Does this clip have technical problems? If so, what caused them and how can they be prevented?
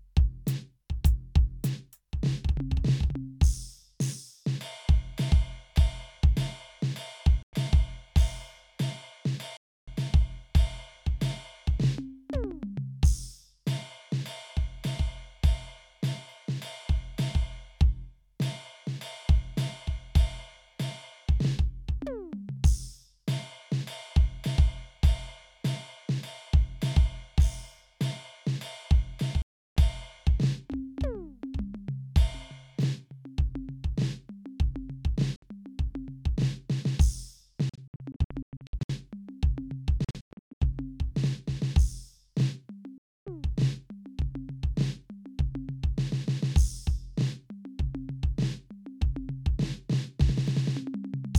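Yes. The music drops to silence at 7.43–7.53, 9.57–9.88, 29.42–29.77, 35.36–35.43, 37.69–38.90, 40.04–40.62 and 42.98–43.27 s. The fifth and sixth spans are scattered and break into several short holes, the longest about 0.12 s. Each time the sound resumes further on, as if it had kept playing. This is likely a Bluetooth dropout: audio packets reached the headphones too late and were discarded. Keeping the source near the headphones, away from 2.4 GHz interference, prevents it.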